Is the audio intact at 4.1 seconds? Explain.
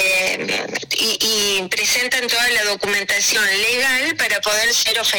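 No. Hard clipping runs through the whole clip, including 4.1 s: the signal is driven about 7 dB past full scale, flattening peaks into harsh fuzz. Clock drift buffer slips also cover 0.54 to 4.93 s, a regular click every 0.88 s, likely from mismatched device clocks dropping or repeating a few samples.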